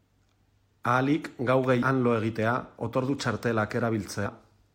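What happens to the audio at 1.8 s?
At 1.81 s there is a brief burst of damaged data in the compressed stream, just before "han lo egitea". Part of the compressed data is corrupt there. The decoder misreads that frame and loses sync while it searches for the next valid header. The result is a short, harsh blip.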